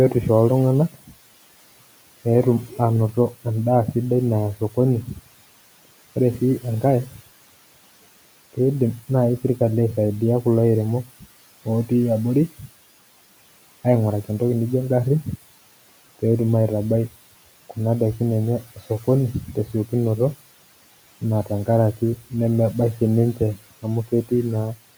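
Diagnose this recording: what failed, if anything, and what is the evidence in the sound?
Call processing is where this goes wrong: the noise suppressor is cutting into the speech. Quiet consonants and word endings get swallowed at 0.91–1.15 s, 4.56–7.2 s, 8.53–12.7 s, 17.7–19.92 s and 21.21–24.8 s, dipping by about 10 to 18 dB. The last stretch loses the most. The room noise sits about 21 dB under the speech, and the suppressor is mistaking those softer bits for that background and pulling them down with it.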